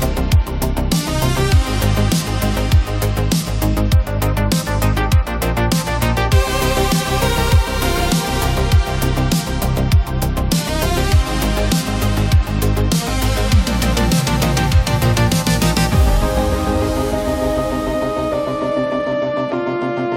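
Nothing is technically wrong with this audio clip.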